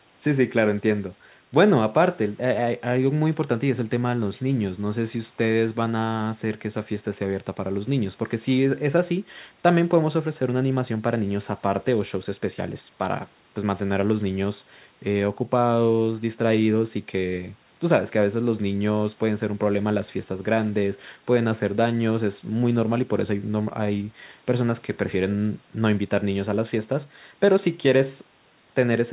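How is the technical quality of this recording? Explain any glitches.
No glitches turn up anywhere in this speech, which just has the narrow, phone-like sound you'd expect from a call, with nothing above 4 kHz, a band that fits a G.711 A-law connection, and the lowest bass trimmed away by the usual microphone processing.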